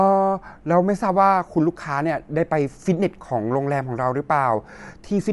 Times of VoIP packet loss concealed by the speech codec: none

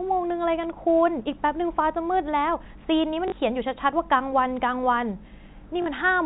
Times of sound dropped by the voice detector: none

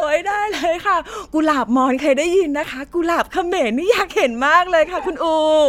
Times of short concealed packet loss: none

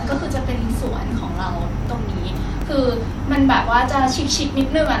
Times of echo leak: none

